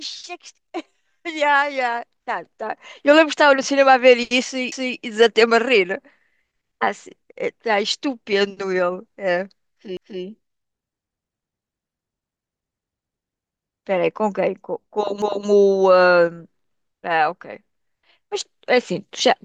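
At 4.72 s, 9.97 s and 15.22 s, overlapping chunks make the speech stutter: each 5-second chunk begins before the previous one ends, so 250 ms replays at every join. Unlike dropouts, nothing goes missing. Sound repeats at evenly spaced joins.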